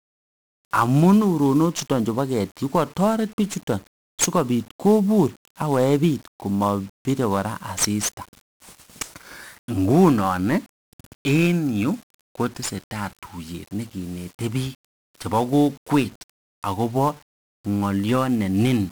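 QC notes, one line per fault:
Throughout, 1-bit DFPWM compression: the speech is coated in a dense, crackling fuzz from start to finish, with the upper frequencies lost under a steady hiss. Each sample carries only a single up-or-down decision that nudges an adaptive level, so the waveform is rebuilt as a jittery staircase and the resulting quantisation noise spreads across the whole spectrum. The damage is heavy, consistent with a one-bit stream at around 48 kbps.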